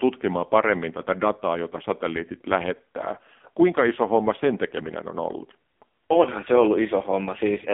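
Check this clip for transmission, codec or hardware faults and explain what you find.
There is one fault, present throughout the speech.

AMR narrowband mobile codec: buzzy, synthetic, heavily damaged voice confined to 200 Hz to 3.6 kHz, with nothing above 3.7 kHz. This fits a low 5.9 kbps mode that rebuilds speech from a vocal tract model and sparse pulses.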